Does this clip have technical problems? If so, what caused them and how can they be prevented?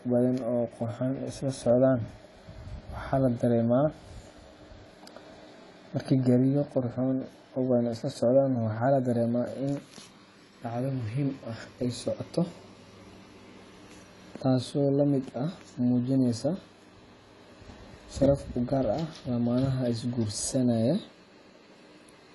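Yes: AAC compression runs throughout, likely from low-bitrate AAC-LC near 32 kbps, cutting everything above 11.5 kHz and smearing sibilants. Encode at a higher bitrate to prevent it.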